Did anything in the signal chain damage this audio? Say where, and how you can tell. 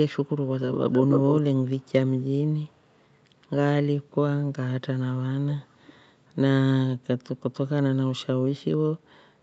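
Yes, there is an echo leak, likely from a loudspeaker on the far end whose echo canceller let its own pickup through. A delayed copy of the speech appears at 0.72–1.34 s, strongest and only about 5 dB below the direct sound. It appears faintly at 1.66–1.92, 2.2–2.32 and 2.73–3.03 s, then again at 5.5–5.65 s. The lag is a fixed 293 ms early and 411 ms at 5.5 s. That discrete, constant-delay repeat marks it as echo rather than room reverberation, which would decay smoothly and diffusely.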